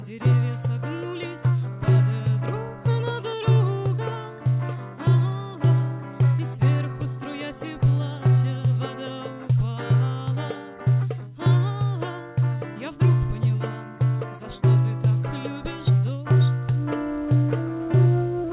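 No technical faults occur at any point in the audio, which arrives over a call link with nothing above 4 kHz.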